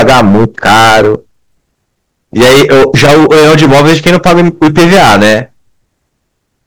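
Hard clipping runs through the whole speech clip, from start to finish. The signal arrives roughly 21 dB hotter than the stage can pass, so every peak is sliced off flat at the ceiling, and something like a third of the samples sit pinned there. Those squared-off tops add a dense spray of high harmonics, heard as a harsh, buzzing fuzz on every loud syllable rather than occasional crackle.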